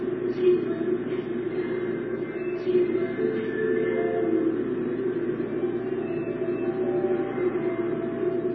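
From start to finish the sound is dulled and smeared, with nothing above 5.9 kHz, likely from transcoding between lossy codecs: a low-rate MP3 pass re-encoded as low-rate HE-AAC. Swirly, watery artefacts from each stage overlap. A spectrogram shows a flat ceiling at 5.9 kHz and patchy, blotchy energy beneath it.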